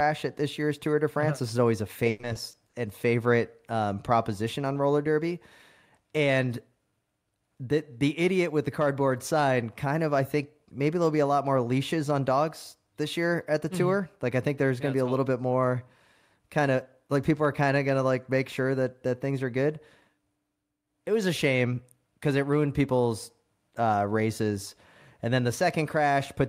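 From 2.09 to 2.75 s, just after "is always a" and before "and favorite um proposition", the speech breaks up with repeated packet loss (robotic sound). A run of dropouts, the longest about 100 ms, is each patched by stretching the preceding sound, so roughly a third of the span is concealment. It sounds choppy, with pieces missing. A spectrogram shows smeared, repeated frames with abrupt seams, and the waveform shows periodic, copied-looking segments.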